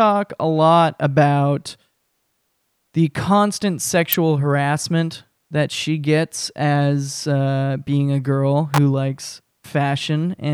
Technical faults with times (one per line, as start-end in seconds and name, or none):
4.13 electrical switching spike
8.74-8.78 electrical switching spike